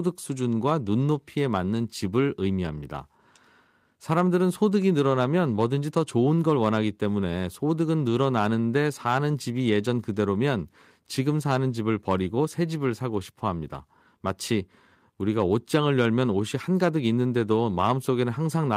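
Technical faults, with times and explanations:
No technical faults are heard in this speech.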